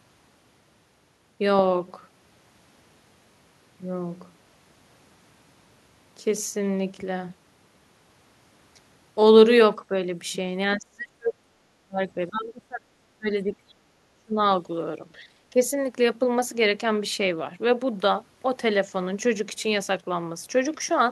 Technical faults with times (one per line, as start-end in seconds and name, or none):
10.77-14.38 speech suppressed in double talk
15.19-15.57 speech suppressed in double talk